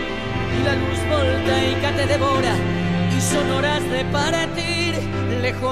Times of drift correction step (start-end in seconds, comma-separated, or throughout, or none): none